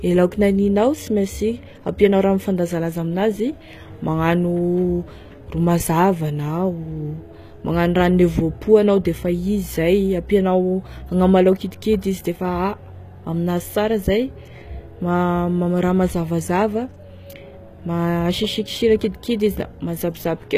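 Throughout, likely HE-AAC compression at what sounds like about 20 kbps rebuilds the treble from copied lower bands. S sounds turn gritty and lispy, with nothing above 14.9 kHz.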